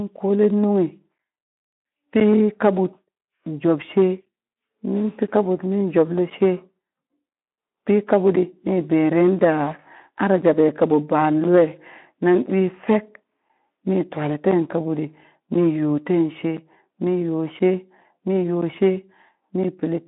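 From 0.16 s to 19.64 s there are periodic USB or driver dropouts: roughly twenty short gaps, each around 10 ms, arriving every 1.02 s like clockwork. Something keeps stalling the audio path, and each hole that lands on speech comes out as a tick, while the speech stays narrow through the Speex link with nothing above about 3.8 kHz.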